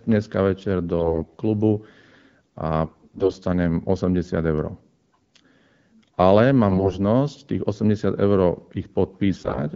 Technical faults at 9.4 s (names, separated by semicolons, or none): AMR bit errors